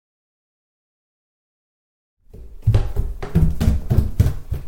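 No technical fault is audible in this everyday sound recording; the level rises in a smooth, deliberate fade-in from around 2 s to 3.04 s, with no click or hard edge.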